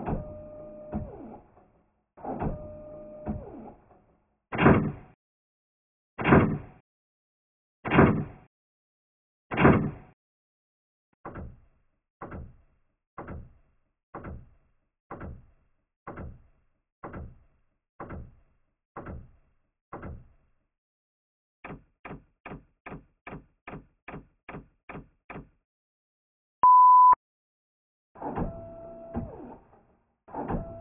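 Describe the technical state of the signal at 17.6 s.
At 17.6 s the signal is intact, with no audible fault.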